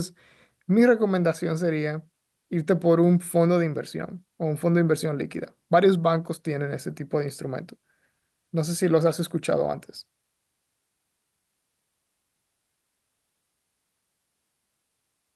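No technical faults are audible.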